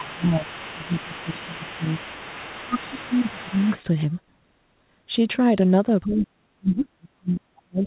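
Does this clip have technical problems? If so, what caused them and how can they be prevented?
Yes. Speech suppressed in double talk: from 0.0 to 1.85 s and 2.6 to 3.67 s the speech dips by up to about 15 dB, and from 6.05 s to the end it drops by about 40 dB. This is likely an echo canceller attenuating everything while both sides talk. Unlike the steady narrowband sound of the 64 kbit/s G.711 path, which has nothing above 4 kHz, these losses come and go. Tuning the canceller's double-talk detection, or using a headset, prevents this.

Other side's voice leaking through: a second, quieter voice sits about 20 dB below the speech from 0.0 to 3.79 s and returns briefly at about 25 dB down from 6.11 to 6.18 s. It is likely loudspeaker echo that the canceller left in. A separate voice like this is distinct from room reverberation, which would only smear the talker's own sound. Better echo cancellation or headphones prevents it.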